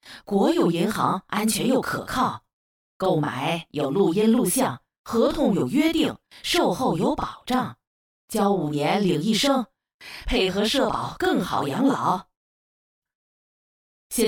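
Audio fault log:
Throughout, channel delay (doubling): every event sounds doubled, with a tight slap trailing each attack at equal loudness. One channel arrives about 40 ms behind the other, and when both are summed to mono, the late copy is heard as a separate repeat.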